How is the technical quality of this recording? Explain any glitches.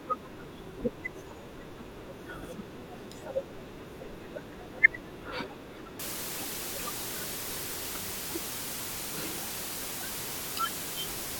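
The recording is clean for its first half, then degrades sharply. From 5.99 s to the end, low bit depth with dither reduces the speech to 6 bits. Dither turns the rounding error into a steady hiss roughly as loud as the speech. That even hiss, without gritty distortion, sets it apart from undithered truncation.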